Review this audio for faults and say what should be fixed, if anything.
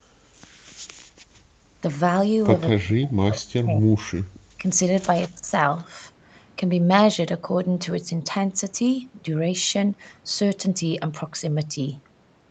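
Background gated by the echo canceller runs from 0.00 to 1.75 s. For about one and a half seconds in total, the room sound under the speech is pulled down by as much as about 40 dB while the far-end loudspeaker plays, then comes back when the canceller releases. On a waveform, the noise floor collapses to near flat. On a spectrogram, the broadband background haze goes dark in blocks with hard edges. Prevention: use a gentler suppressor with comfort-noise fill, so the canceller doesn't gate the background.

Speech suppressed in double talk is the likely cause of three dips in the talker's level: 2.75 to 4.11 s (roughly 40 dB deep, about one and a half seconds affected), 4.57 to 4.63 s (roughly 10 dB), and 5.29 to 5.51 s (roughly 20 dB). The canceller can't tell the near talker from loudspeaker echo while both sides speak, so it turns everything down. On a waveform, the speech envelope is hollowed out. 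On a spectrogram, the harmonics fade or break into patches. Prevention: tune double-talk detection so near-end speech is kept when both sides talk.

An echo leak is the likely explanation for two brief delayed copies of the speech, 191 ms behind the original. One runs from 5.22 to 5.29 s at about 25 dB below the speech, the other from 5.78 to 5.83 s at about 35 dB below. Residual loudspeaker pickup slipped past the canceller and was sent back. On a spectrogram, faint ghost copies of the harmonic patterns appear offset by 191 ms, all within the 8 kHz bandwidth of the Opus call path. Prevention: improve the echo canceller's convergence and the acoustic isolation between loudspeaker and microphone.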